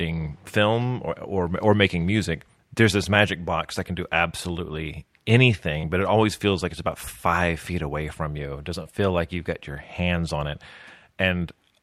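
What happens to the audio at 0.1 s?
Nothing goes wrong at 0.1 s; the audio is intact at that point, with no dropout, click or other fault.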